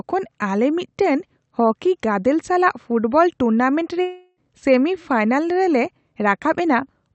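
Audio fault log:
4.01–4.39 s: long network dropout. After "ᱜᱟᱫᱮᱞ ᱥᱟᱞᱟᱜ ᱯᱷᱩᱴᱵᱚᱞ ᱴᱩᱨᱱᱟᱢᱮᱱᱴ", a fading buzz fills the gap and briefly goes silent before "ᱥᱮᱢᱤ ᱯᱷᱟᱭᱱᱟᱞ ᱨᱮᱞᱮ". This is likely about 0.36 s of lost packets, concealed rather than played.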